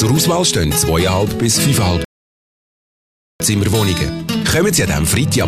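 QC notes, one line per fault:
2.05–3.40 s, rebuffering stall: playback runs dry and drops to silence for about 1.36 s, then picks up at exactly the point it left off. Nothing is skipped or repeated; the player simply waited for more downloaded audio, so time is added.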